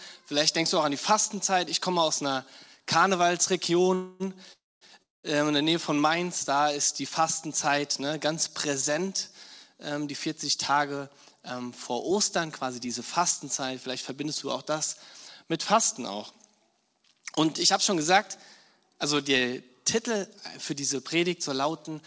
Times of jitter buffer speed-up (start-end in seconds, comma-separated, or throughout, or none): 10.72-14.25, 18.81-21.88